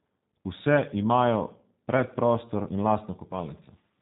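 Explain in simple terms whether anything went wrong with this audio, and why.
Something did go wrong, and it lasts the whole clip. The speech has passed through the G.729 codec, a phone-call compressor. It rebuilds the voice from a rough model, so it sounds slightly rough and synthetic. Everything above about 3.8 kHz is gone, leaving it muffled.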